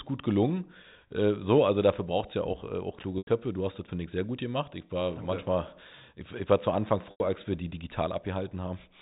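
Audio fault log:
3.18–3.27 s and 7.11–7.20 s, packet loss with pitch repetition: about 90 ms lost each time, likely three 30 ms packets. The receiver repeats the last pitch period, fading it over roughly 50 ms into brief silence before speech cross-fades back.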